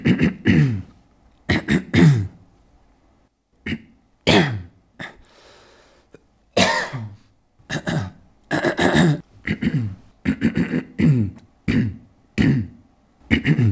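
Nothing's wrong with these everyday sounds: they just come through a call line whose top end stops around 8 kHz, which is what you'd expect from a G.722 call codec doing its normal job.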